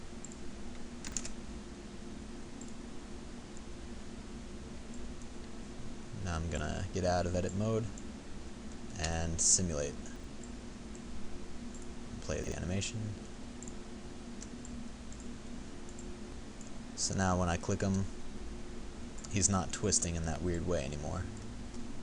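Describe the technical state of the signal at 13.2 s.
At 13.2 s the signal is intact, with no dropout, clipping, distortion or other fault audible at that point.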